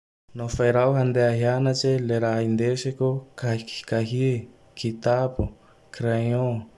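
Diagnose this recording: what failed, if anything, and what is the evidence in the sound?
Nothing in the speech stood out on listening that would point to a failure at any stage of the chain.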